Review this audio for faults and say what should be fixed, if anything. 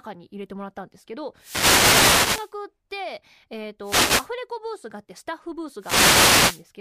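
The radio link of an analogue FM wireless microphone faded three times as reflected signals cancelled at the receiver, letting receiver noise rise. Each is a wireless microphone noise hit, heard as a burst of swishing static over the speech from 1.36 to 2.53 s, 3.82 to 4.30 s and 5.79 to 6.64 s. Prevent this with diversity receivers, line-of-sight antenna placement and a shorter transmitter-to-receiver distance.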